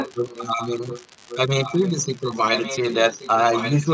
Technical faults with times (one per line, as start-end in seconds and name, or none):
0.00-3.93 unreliable data bit
0.04-2.16 echo leak
2.53-3.93 echo leak